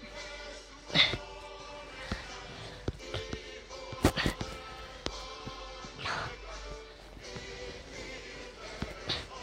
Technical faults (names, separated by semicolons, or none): none